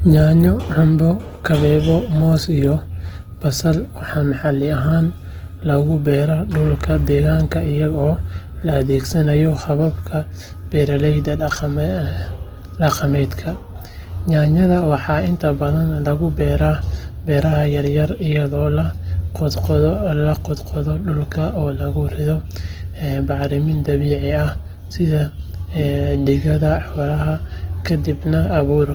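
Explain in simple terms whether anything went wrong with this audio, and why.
Opus compression damage runs through the whole recording, from the first second to the last. The speech sounds rough and grainy, with a noisy fizz clinging to it instead of clean, smooth tone. The likely cause is squeezing the audio into a very small file. When there isn't room to store every detail, the encoder keeps the overall loudness of each pitch range but fills in the fine detail with copied or noise-like sound.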